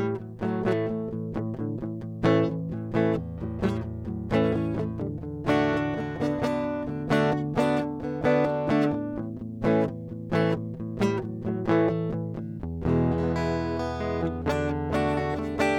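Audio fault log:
No faults are heard in this music recording. There is nothing to log at any point in it.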